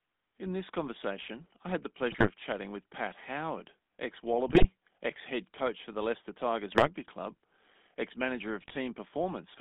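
The whole clip carries the GSM full-rate codec. The speech passes only a band from about 150 Hz to 3.6 kHz, so it sounds thin and boxed in. The codec rebuilds the voice from a vocal-tract model driven by a sparse pulse excitation. That leaves a buzzy, gravelly roughness on the voice. The damage is plainly audible. The sound fits a 13 kbps full-rate stream.

GSM bit errors break through four times: 2.08 to 2.31 s, 4.48 to 4.67 s, 6.72 to 6.89 s, and 8.60 to 8.77 s. Each burst lasts about 0.2 s. Corrupted bits reached the decoder and spoiled its filter, pitch and gain values. The spectrum bends and the level jumps for a few frames. The speech turns into squawks, pops and gargling, then recovers.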